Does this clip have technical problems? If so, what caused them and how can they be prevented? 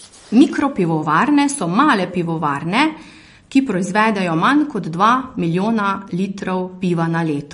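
Yes. Throughout the speech there is likely MP3 compression with too few bits, which fits a bitrate around 40 kbps. The encoder cuts everything above 10.6 kHz and zeroes weak frequency lines frame by frame, leaving a dull, plainly watery sound. Encoding at a higher bitrate prevents this.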